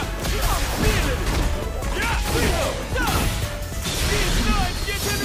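From 0.2 to 5.15 s, word clock ticks recur about every 0.15 s as an unlocked clock slips samples, showing evenly spaced vertical spectrogram lines.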